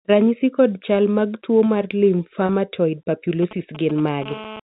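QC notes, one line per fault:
2.46 to 2.49 s, packet loss with pitch repetition: a 30 ms gap, consistent with one lost packet, is bridged by repeating the last pitch period, so the sound briefly holds on a slightly buzzy, static tone instead of moving on. Because the gap is short it never fades to silence. On a spectrogram the harmonics run flat and unchanging for those 30 ms. In the waveform, identical cycles repeat back to back.
3.43 to 4.24 s, GSM signalling bursts: a nearby 2G phone sending short groups of radio bursts, as in signalling, gets rectified by the audio circuit into a galloping dit-dit-dit of brief buzzes at about 217 Hz, roughly 15 dB below the sound. The spectrogram shows clustered vertical stripes with a 217 Hz harmonic comb. The waveform shows rhythmic clumps of sharp spikes.
4.26 to 4.60 s, GSM phone buzz: the phone now transmits continuously at the call rate of about 217 bursts a second, and rectification turns this into a hard, raspy buzz unrelated to the sound, about 14 dB below it. 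On a spectrogram it appears as a steady ladder of horizontal lines at 217 Hz and its many harmonics, reaching well up the band. The waveform carries a regular train of pulses at that rate.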